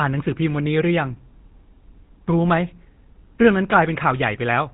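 Throughout, the speech is plainly buzzy and gravelly with nothing above 4 kHz: GSM full-rate codec damage, from a pulse-excited vocal-tract model fitting 13 kbps.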